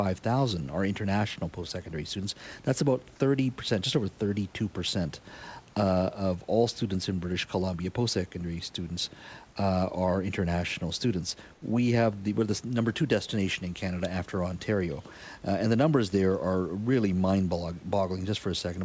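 A speech clip, with room noise about 31 dB below the speech, carried over a call path that passes nothing above 8 kHz. From 11.54 to 11.62 s, the real background vanishes for 80 ms. A steady, featureless hiss takes its place, about 2 dB quieter. This is comfort noise in place of the background. The likely cause is discontinuous transmission: the sender stopped sending during the pause, and the receiver filled the gap with synthetic noise.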